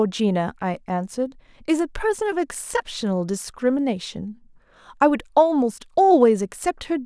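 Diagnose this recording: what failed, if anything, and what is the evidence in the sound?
Nothing stood out on listening to this speech recording, and no stage in the chain gives any sign of having failed.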